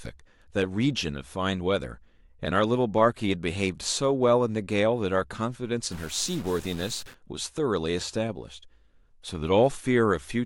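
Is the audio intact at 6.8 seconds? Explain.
No. At 6.8 seconds the speech sits inside a stuck bit fault running from about 5.92 to 7.15 s. The distortion likely comes from one bit of the sample data being held at a fixed value, so roughly half the samples are pushed off by a step of about -40 dBFS, in a pattern that follows the waveform. The result is a harsh, buzzy grit laid over the speech for that stretch.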